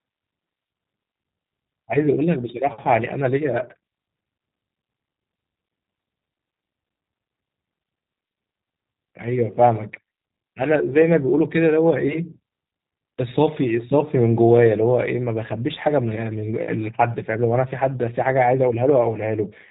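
Throughout, the speech has passed through a G.729 codec, and its sound fits G.729A at 8 kbit/s. The codec rebuilds the speech from a filter model and a few pulses per frame, so everything above 4 kHz is gone and the speech comes across plainly rough and synthetic.

From 11.02 to 11.08 s, VoIP packet loss concealed by the speech codec: a gap fitting one lost 10 ms frame was filled by extrapolating the previous pitch and filter. The sound is briefly stretched and fades, and the speech stays weak or distorted until about 11.08 s.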